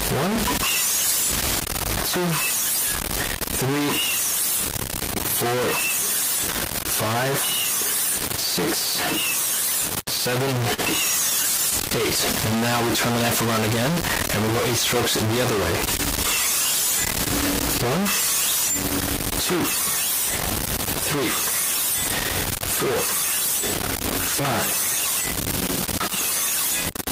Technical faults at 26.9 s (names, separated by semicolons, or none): low bit depth without dither